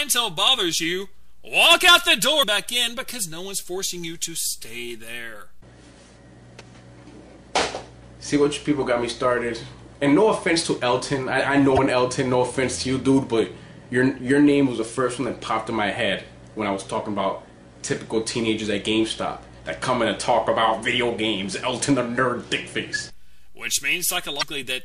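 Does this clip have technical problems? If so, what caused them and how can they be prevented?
Yes: damaged data in a compressed stream causes brief glitches at 2.39–2.44 s, 11.76–11.79 s and 24.39–24.43 s, where corrupted frames make the decoder lose sync. Verify file integrity with checksums and use error-protected transport.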